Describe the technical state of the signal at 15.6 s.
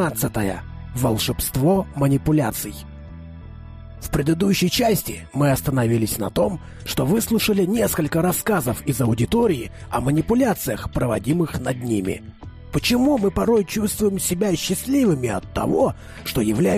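At 15.6 s the audio is intact, with no dropout, distortion, glitch or other fault audible at that moment.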